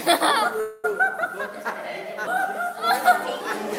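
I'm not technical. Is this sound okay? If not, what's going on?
No. From 0.60 to 0.85 s there's a call audio freeze: the last sound stretches into a fading buzz for about a quarter second, likely from delayed network packets, then resumes with nothing lost.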